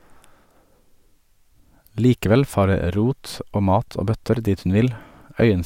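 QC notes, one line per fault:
No faults found on review of this speech recording.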